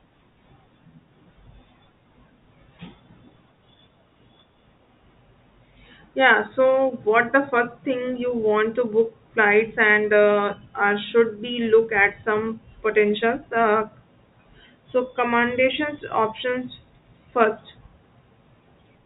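No faults found in the speech; the audio comes through an A-law telephone path at 64 kbps, with the band topping out at 4 kHz, as that coding always does.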